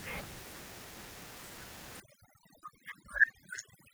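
From 2.0 s to the end, overdone noise removal takes hold. Before that, room noise sits about 18 dB below the speech. From 2.0 s, that noise floor drops away, dotted with twinkling specks where isolated frequency bands flicker back in. Quiet parts of the speech are pulled down along with the noise. A noise gate would cut everything together; here the damage is band by band, which gives the glassy, bubbling texture.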